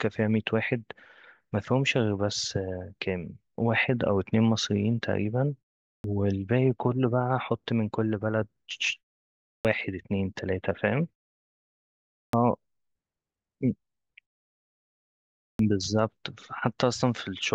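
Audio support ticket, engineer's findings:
Clipped start after a pause at 6.00, 9.60, 12.29 and 15.55 s: onsets arrive abruptly, about 41 to 48 ms missing after 0.45 to 1.36 s gaps. Output device sleeping in silence, waking too late.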